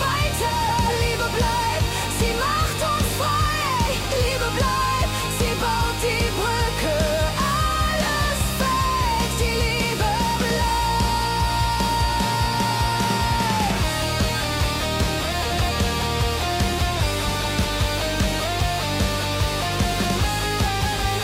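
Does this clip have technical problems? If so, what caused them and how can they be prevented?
Yes, frames out of order at 0.49–0.89, 15.31–15.71, 17.26–17.65 and 20.65–21.06 s: two roughly 186 ms blocks swapped, giving a garbled flutter. Reorder packets by sequence number before decoding.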